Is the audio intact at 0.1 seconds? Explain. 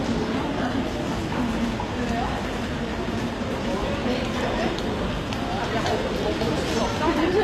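No. At 0.1 s, as throughout, the treble sounds gritty and metallic and stops near 15.5 kHz, likely from HE-AAC compression rebuilding the top band from copied lower bands at a low bitrate.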